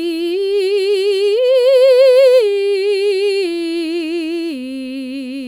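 No technical faults can be heard in this music.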